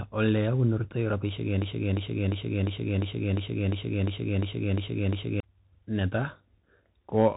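From the first second to the last, the speech carries the sound of a Bluetooth CVSD headset codec. Nothing passes above 3.8 kHz, so the audio is narrow and boxy. CVSD codes each sample as a single up-or-down bit, and the step size adapts as it goes. The damage is plainly audible. A granular hiss sits under the speech, s sounds turn scratchy, and loud bright moments distort where the step cannot keep up. The character fits a 64 kbit/s CVSD link.

At 1.62 s a broken-record loop begins and runs until 5.40 s. A fragment about 0.35 s long repeats exactly, back to back, eleven times. It sounds like a stuck groove, with the same snippet hammering over and over. The likely cause is a stalled player, encoder or stream that kept resending the last piece it held. Whatever should have played across those seconds is lost.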